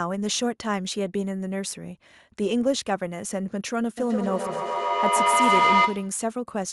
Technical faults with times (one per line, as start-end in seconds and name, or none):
3.98-6.27 feedback echo between two devices